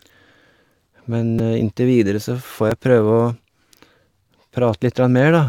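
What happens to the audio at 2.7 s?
A repeated buffer occurs at 2.70 s. New audio arrived late, so the device replayed its last chunk of about 5.3 ms, which fits a 256-sample buffer, two extra times. The hard joins make a brief buzzy click, and roughly 10 ms of sound is lost.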